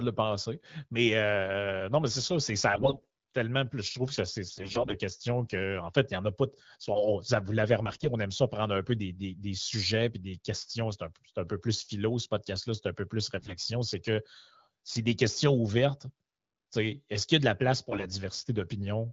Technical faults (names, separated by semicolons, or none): AMR bit errors